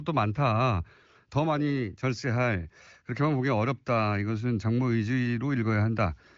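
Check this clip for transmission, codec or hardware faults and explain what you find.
Nothing here needs fixing: the speech is coming over an AMR wideband (HD Voice) link at what sounds like one of its higher rates, with the top end tapering off around 7.4 kHz just as that codec's bandwidth would suggest.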